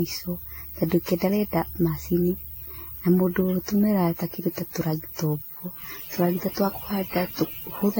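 Generation loss runs through the whole speech recording: swirly, hollow smearing, blurred attacks and nothing above 16.6 kHz, likely from about seven successive lossy AAC encodes at around 64 kbit/s. Mains buzz enters at 5.77 s, just after "kĩndũ ta tũragita ũguo", and lasts to the end. It is a raspy 50 Hz harmonic buzz about 25 dB below the signal, the switching spikes of a dimmer, rectifier or unshielded line getting into the signal path.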